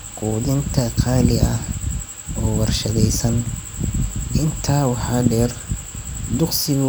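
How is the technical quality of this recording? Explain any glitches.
The recording shows no technical faults, so there are no glitches to explain.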